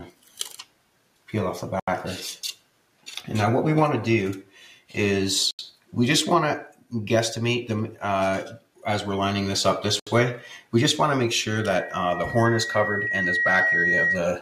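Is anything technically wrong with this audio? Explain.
Yes, there are four kinds of problem here.

The whole clip runs through a noise suppressor built for speech, applied to music or sounds. It treats steady tones and tails as noise, so attacks pass while sustained parts sink. The level swings by around 5 dB and the sound pumps and thins.

On top of that, there are seven spots where sound gets cut by the noise suppressor: 0.11–0.38 s, 0.63–1.28 s, 2.56–3.07 s, 4.75–4.92 s, 5.73–5.93 s, 6.72–6.92 s and 8.59–8.83 s. Held or decaying material gets pushed down about 11 to 12 dB there, and tails get clipped short.

Three short dropouts to silence hit at 1.80–1.88 s, 5.51–5.59 s and 10.00–10.07 s, lasting 78, 80 and 72 ms. This sounds like a Bluetooth stall, likely from interference delaying packets until the headphone buffer ran empty. Playback then resumes.

From 11.55 to 14.27 s there's a loudspeaker feedback squeal at 1.9 kHz. 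A mic is hearing its own speaker, and at that frequency the loop gain tops one. The tone swells over about two seconds and ends up roughly 5 dB above the rest.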